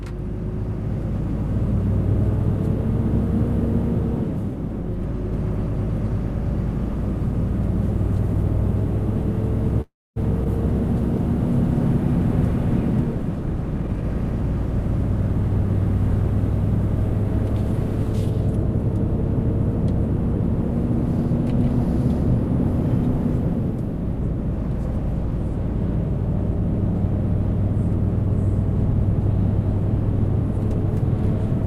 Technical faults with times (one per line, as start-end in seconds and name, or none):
9.81-10.18 call audio freeze
10.44-10.47 skip ahead
13.78-14.69 jitter buffer speed-up
21.26-26.62 jitter buffer speed-up
28.93-30.85 jitter buffer speed-up